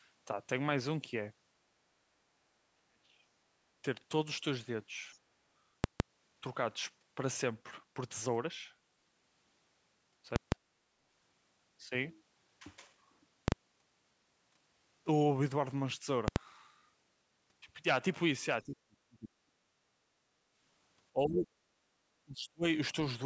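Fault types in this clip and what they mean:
Speech suppressed in double talk: The speech dips hard, by as much as around 40 dB at the deepest, losing level in chunks at 2.76–3.27 s, 18.66–19.31 s, 19.64–19.69 s, 20.08–20.15 s, 21.13–21.51 s and 22.23–22.64 s. It's likely the echo canceller hearing the far side talking at the same moment, failing to tell the near talker from loudspeaker echo, and clamping down on everything.
Invalid numbers at full scale: Some calculation in the chain spat out infinite or invalid values, which got pinned to the maximum sample value, so the output sits flat at one extreme value, far from zero, for a whole block. The longer blocks at 5.84–6.0 s and 10.36–10.52 s, each 160 ms, give a loud pop in, dead air, then a pop out. The shorter ones at 13.48–13.52 s (40 ms) and 16.28–16.36 s (80 ms) land more like single bangs.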